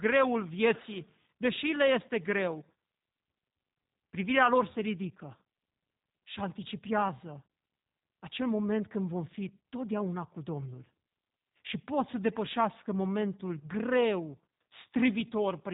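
A speech recording that sounds rough and slightly synthetic from start to finish, with a boxy, band-limited tone: nothing reaches above 3.8 kHz, so sibilants lose their edge. The damage is plainly audible and points to the G.729 codec, here its G.729A variant, which fits an 8 kbit/s VoIP stream. It models each short frame as a vocal tract filter driven by a pitch predictor and a few pulses, trading natural texture for low bitrate.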